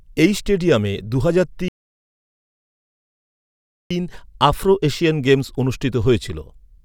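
Speech playback halts at 1.68 s and resumes at 3.91 s: a rebuffering stall, where the player drained its buffer, adding 2.2 s of silence without losing any audio.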